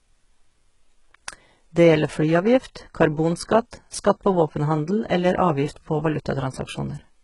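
Throughout the speech, the treble sounds rebuilt rather than recorded. The heavy damage likely comes from HE-AAC compression, fitting a bitrate near 12 kbps. Copied upper bands misalign with the harmonics below. Nothing reaches above 11.1 kHz. S sounds turn gritty, metallic or lispy.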